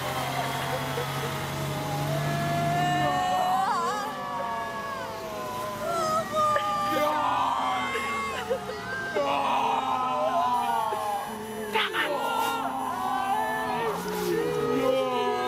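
From 10.54 s to 14.66 s a USB whine sits under the sound: a steady, fixed-pitch tone built on 1 kHz, with its strongest component at the third harmonic, 3 kHz, about 20 dB below the signal. The 1 kHz spacing matches the bus's 1 ms frame rate. Current drawn in step with each frame is getting onto the audio through shared power or ground, so the interference comes out as a thin, hard whine that holds its pitch throughout.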